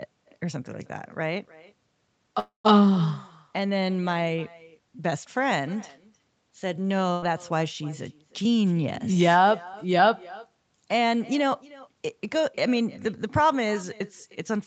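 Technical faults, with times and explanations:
Throughout: echo with no canceller. Every phrase of the speech is followed by a faint copy about a third of a second later, roughly 23 dB down, sounding thinner than the original. This is the talker's own voice returning from a far-end loudspeaker into a microphone with nothing subtracting it. Unlike room reverberation, which smears continuously, this is a distinct delayed repeat whose spacing stays fixed, matching the network round trip.
2.39 to 2.66 s: call audio freeze. The sound stalls for about 250 ms. The last sound is drawn out and fades, and about 130 ms of it is full silence before the speech carries on exactly where it stopped. The likely cause is delayed packets draining the jitter buffer, so the receiver had to invent audio while it waited. What separates this from packet loss is that nothing is skipped. A gap has been inserted, and everything after it now arrives about a quarter second later.
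7.12 to 7.24 s: burst of packet loss. For roughly 100 ms the sound turns into a held, dimming buzz or hiss, and the speech then resumes further along with about 100 ms of it gone. Concealment stretched the last received audio across lost packets and faded it as the gap grew. Unlike the freeze at 2.4 s, this one leaves a jump in the speech where a piece has been cut out, and timing is not pushed later.
8.99 to 10.02 s: jitter buffer speed-up. Across this second the speech runs about 8 percent fast and sounds hurried, though its pitch is unchanged. The receiver had more audio queued than it wanted and trimmed short pitch-period slices repeatedly, about 100 ms in total, to cut the delay. A tape-style speed change would raise the pitch, whereas here only the pace changes. The effect is spread smoothly over the stretch and leaves no single audible gap.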